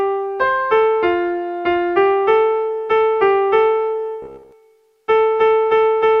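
At 4.22 s the sound goes robotic for about 0.3 s, up to 4.52 s. It's a stiff, metallic buzz locked at about 67 Hz that only loosely tracks what was going on underneath. That's the repeated-short-buffers kind of robotic sound. The likely cause is new audio not arriving in time, so playback kept looping a chunk of roughly 15 ms (one cycle of that buzz). Most of that stretch is repeats rather than fresh audio.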